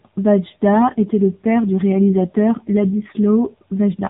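From start to finish, the speech carries the sound of the AMR narrowband mobile codec, heavily damaged. The audio is squeezed into an 8 kHz sampled band, so nothing above 4 kHz survives. The sound is dull and boxed in. The codec rebuilds each 20 ms frame from a vocal-tract model fed by a few pulses. At this low rate, about 6.7 kbps, that model is starved. The result is buzzy and synthetic, with a rough, processed edge throughout.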